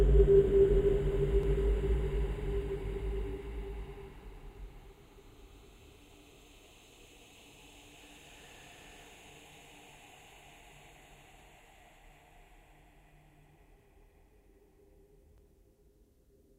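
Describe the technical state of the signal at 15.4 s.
At 15.38 s there is an overlap between stream segments. Two segments' time stamps overlap, and the player trims about 11 ms of sound that was never actually doubled, at a boundary consistent with 2-second segments. The result is a brief click or skip. The waveform shows an abrupt discontinuity, and the spectrogram shows a thin vertical broadband line.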